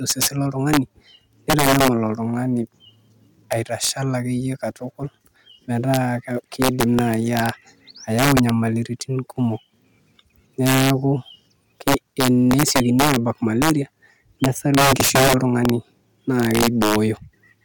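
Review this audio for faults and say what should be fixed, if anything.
Integer overflow runs through the whole speech clip: the signal is driven about 7 dB past full scale, and around one percent of samples wrap to the opposite sign, giving violent cracks on loud syllables. The waveform shows peaks snapping across the full range, and the spectrogram shows broadband vertical streaks. Use saturating arithmetic or a limiter before the integer conversion so that overs are clamped instead of wrapping.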